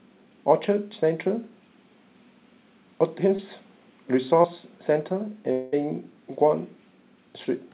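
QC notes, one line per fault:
3.36–3.40 s and 4.42–4.46 s, short concealed packet loss: in each spot about 20 ms of the call failed to reach the decoder in time. The receiver bridged the gap by extending the preceding sound, for about 22 ms at the first and 16 ms at the second, then crossfaded back into real audio. Each is heard as a tiny smear or wobble, dull and band-limited like the rest of the narrowband G.711 line, with nothing above 4 kHz.
5.52–5.74 s, long network dropout: the sound turns into a synthetic continuation lasting about 0.2 s, a buzzy or hissy extension of the last sound that fades without ever reaching true silence. This is likely a stretch of about 200 ms that never arrived over the network. The receiver kept inventing audio from what came before until real sound resumed, and the missing portion is simply absent once playback continues.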